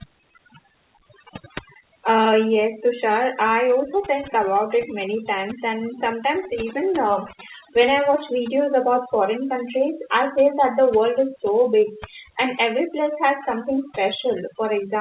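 From start to finish the speech carries overdone noise removal. A noise reducer set far too aggressively has pulled individual frequency bands down or shut them off whenever their level sat near its noise estimate, taking the softer parts of the voice along. The background collapses into near silence dotted with twinkling specks. Unlike codec coding noise, the damage tracks signal level. The call path's steady cut-off at 4 kHz, consistent with G.711 at 64 kbps, is a separate, fixed band limit.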